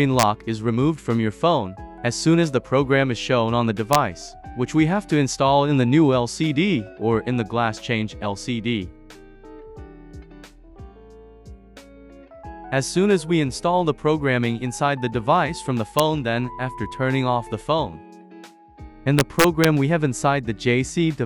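Integer overflow: the gain stage lets loud peaks run past the largest integer and wrap to the opposite sign instead of limiting them. Harsh cracks sharper than clipping result, at 0.19–0.23 s, 3.93–3.95 s, 15.99 s and 19.19–19.65 s, where peaks exceed the limit by only about 0 to 2 dB.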